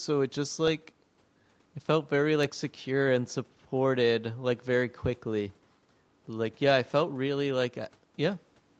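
Nothing stood out on listening to this speech, which carries nothing above about 8 kHz, as expected from a call path.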